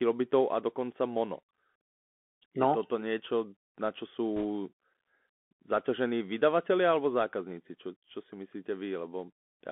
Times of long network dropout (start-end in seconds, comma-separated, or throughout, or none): none